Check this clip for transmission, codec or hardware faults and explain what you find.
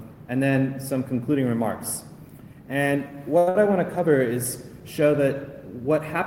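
Two short stalls from late packets occur, close together. At 3.38 to 3.48 s and again at 3.49 to 3.56 s, packets arrived late and the jitter buffer ran dry, so the receiver held the last sound for about 86 ms and then 60 ms before resuming. Nothing is lost, but the sound briefly freezes with a faint buzz or dip.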